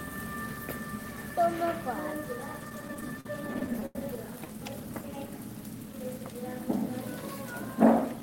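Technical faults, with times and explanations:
2.69–3.96 s, repeated stalls (stutter): the sound catches and drags in a quick run of fifteen short hitches over this span, each one a brief hold on whatever was just playing, the longest about 90 ms. About 265 ms in all, roughly a fifth of the span, is filled this way, yet nothing drops out. Packets were reaching the receiver late, so its jitter buffer kept emptying, and each time it stretched the last sound to cover the wait until fresh audio came in.
4.76–5.28 s, jitter buffer slow-down: here the sound eases off to about 92% speed without any change in pitch, with slightly drawn-out stretches and perhaps a faint warble. About 48 ms of extra material is slipped in. The jitter buffer was short on reserve or had raised its target delay, so the receiver rebuilt its margin by repeating single pitch periods or pieces of quiet over and over, which stretches the timing while the pitch stays put.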